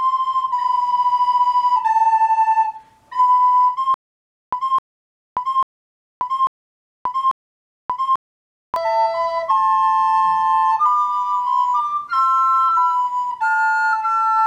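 From 3.94 s to 8.76 s the audio falls into a stutter with silent gaps. A fragment of about 260 ms plays, then drops into dead digital silence for about 583 ms. The same fragment returns five times at a steady 843 ms cycle. The sound that belonged in that stretch never arrives. The likely cause is a stalled player or stream that replayed its last buffered piece at each retry before running dry.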